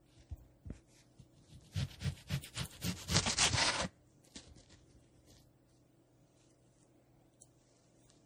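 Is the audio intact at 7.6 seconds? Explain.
No. At 7.6 s the sound carries generation loss, which runs through the whole clip. It is smeared and swirly, with a hollow, scooped quality, and its attacks are blurred rather than crisp. The likely cause is repeated lossy coding, with the audio decoded and re-encoded as MP3 around five times. The damage suggests a low rate near 64 kbit/s. Each pass requantises on a shifted frame grid, so noise and spectral gaps pile up.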